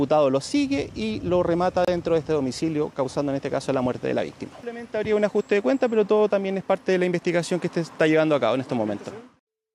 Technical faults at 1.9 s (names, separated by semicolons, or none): gap at a join of encoded pieces